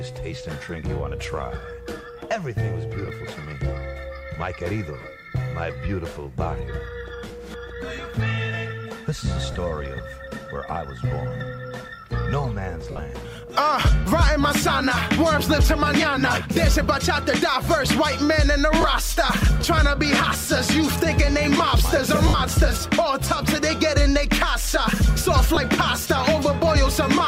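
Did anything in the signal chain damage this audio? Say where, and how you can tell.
Yes, there are lost LE Audio frames on the Bluetooth link. Dropouts occur at 3.06 s (20 ms), 5.01 s (30 ms), 7.28 s (20 ms), 9.52 s (30 ms), 12.91 s (70 ms scattered over 80 ms), 18.81 s (30 ms), 22.28 s (60 ms) and 25.55 s (20 ms). The 10 ms steps fit 10 ms frames. The LC3 decoder fills each gap by replaying the last spectrum with random signs, so the gap becomes a brief noisy smear that fades over the longer losses.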